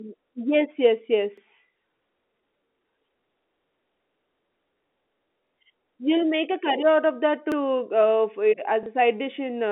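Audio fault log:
1.38, 3.42, 5.47 and 7.52 s: overlapping chunks. The audio runs in 2-second blocks, and each block starts about 48 ms before the previous one ended, so that short slice plays twice at every join. The result is a brief stutter with a click, repeating about every 2.05 s. The third falls just before "you'll make a curry", and the fourth just after "curry out of that".
8.83 to 8.86 s: packet loss with last packet repeated. A 30 ms stretch goes missing, and the receiver fills it by replaying the audio just before it. That points to a single lost 30 ms packet. The moment sounds like a small blip. It sits inside the narrow 250 Hz to 3.6 kHz band of the G.711 telephone line.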